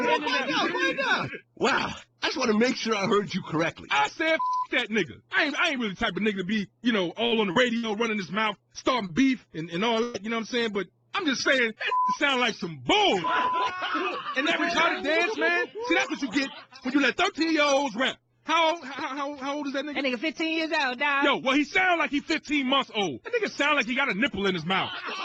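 A short stretch of this audio, roughly 7 to 12 s, carries network damage. Short concealed packet loss occurs at 7.27–7.33 s, 7.51–7.57 s, 9.07–9.11 s and 11.94–11.98 s. The receiver patched gaps of about 20 to 40 ms by extending the preceding sound, leaving brief smears or wobbles. A burst of packet loss follows at 7.77–7.85 s (60 ms missing) and 10.03–10.16 s (120 ms missing). There the last sound is held and faded as a buzz or hiss before playback resumes further on, with the intervening audio gone.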